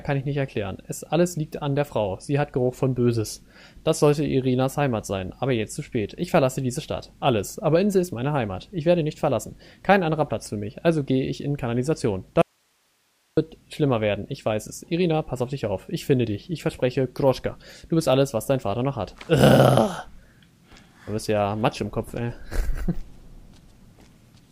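An audio dropout to a faint residue runs from 12.42 s to 13.37 s, cutting the sound off for just under a second. The signal vanishes abruptly, with no fade, and the gap holds only hiss sitting roughly 45 dB below the normal level before the audio snaps back in mid-flow. The likely cause is a brief loss of the wanted source while the downstream chain stayed live, so its own noise floor carried through the break.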